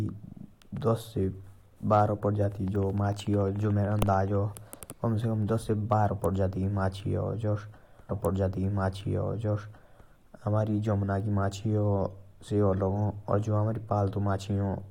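A speech recording with two faults. From 2.68 to 4.36 s, likely interference from nearby equipment or a faulty connection injects a train of clicks: about twenty near-identical pulses at a regular 13.7 per second, right after "बारो परजाती", heard as a steady ticking roughly as loud as the speech. Later the player queued the same stream segment twice, so a stream segment is repeated: at 8.08 s playback jumps back with a small blip and replays about 2.0 s of programme through 10.09 s, lengthening the clip by that amount.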